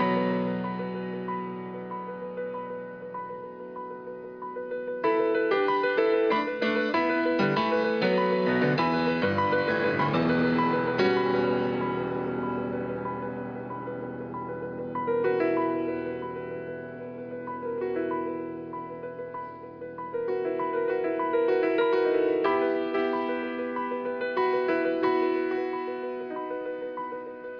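No technical faults are audible.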